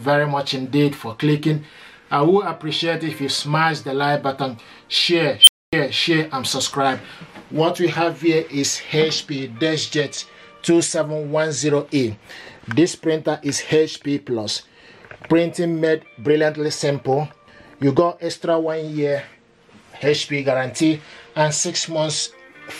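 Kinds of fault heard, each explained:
Unstable filter: a recursive filter in the chain runs away, its output feeding back on itself and growing without bound. At 5.40 s a squeal of roughly 3 kHz swells to full level in about 68 ms and clips, then the arithmetic overflows and the sound drops out for about 255 ms until the filter resets, ending near 5.73 s. Acoustic feedback howl builds over seconds and never falls into sudden silence.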